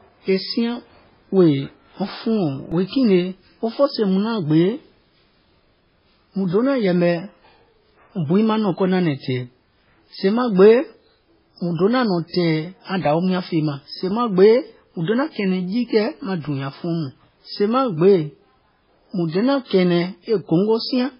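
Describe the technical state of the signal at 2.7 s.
At 2.72 s a repeated buffer occurs: a fragment of about 1.5 ms, consistent with a 64-sample buffer, plays two extra times with hard joins, producing a click or brief buzz and losing a few milliseconds of audio.

Throughout, including this moment, the sound is heavily watery and swirly with nothing above 5.3 kHz. This is likely MP3 compression, consistent with a very low bitrate of around 16 kbps.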